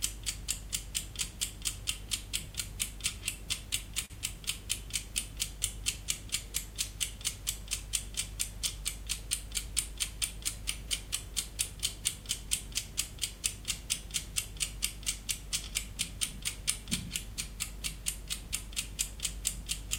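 A short stall from a late packet occurs at 4.05 s and lasts until 4.12 s. A packet failed to arrive on time and the jitter buffer ran dry, so the receiver held the last bit of sound for about 45 ms until the packet showed up, then resumed from where it had stopped. No audio is lost, but the sound hangs for a moment with a faint buzzy or dipped quality, and the playback delay grows by 45 ms.

A jitter buffer speed-up runs from 9.06 s to 11.07 s. The buffer was holding more audio than its target, so the receiver trimmed it by cutting out tiny pitch-period-sized slices many times in succession, removing around 40 ms in total. Playback runs at about 102% speed with the pitch unchanged across that two-second stretch.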